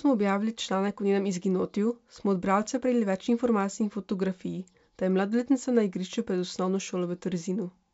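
Nothing is technically wrong with this speech recording. It carries the bandwidth of G.722 wideband telephone coding at 64 kbit/s, reaching up to about 7 kHz, with at most a faint trace of the coding in the upper band.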